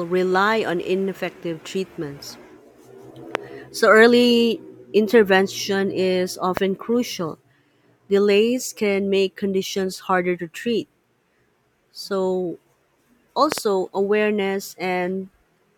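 A sharp loud pop cuts through the speech at 3.35 to 3.37 s, standing roughly 20 dB above it, with another at 6.57 to 6.59 s, around 15 dB up. At 13.52 to 13.60 s a similar-strength pair of pops lands in quick succession. The speech continues underneath each one. The likely cause is a sudden voltage step or spike, from a plug, switch, static discharge or driver glitch, that was added to the signal and then shaped by the following circuitry.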